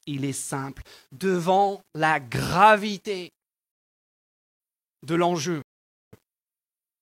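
Rebuffering stall at 3.72 s, right after "la gravité": the speech drops to silence until 4.60 s, then picks up exactly where it left off, adding 0.88 s. A second stall runs from 5.62 to 6.13 s, inserting 0.51 s of silence. In both cases the player exhausted its downloaded audio and paused until more data arrived, so nothing is skipped or repeated; the gaps are simply dead air stretching the clip's timeline.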